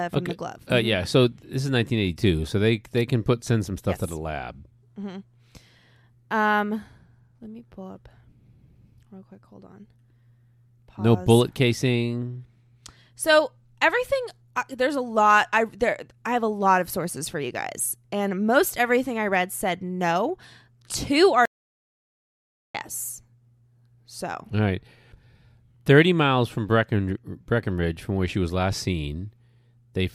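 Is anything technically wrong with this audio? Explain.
Yes. From 21.45 to 22.75 s the speech cuts to dead silence without room tone, likely an audio dropout to silence: input lost, silence recorded, 1.29 s gone.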